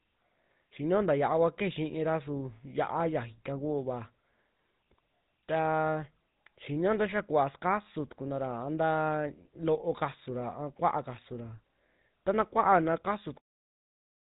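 A buzzy, gravelly roughness runs through the whole recording, with nothing audible above 4 kHz. That is the GSM full-rate codec, which rebuilds speech from a vocal-tract model driven by coarse, regularly spaced pulses, plainly audible here and consistent with a 13 kbps coder. The ending fades out smoothly from about 13.4 s.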